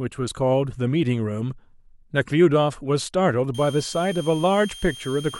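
A speech clip with a switching supply whistle coming in at 3.54 s and running to the end: a thin tone around 3 kHz, wandering slightly between 3.18 and 3.2 kHz, sitting about 20 dB under the speech. It's a switching power supply chattering in audible burst mode, or two supplies beating, leaking into the signal path.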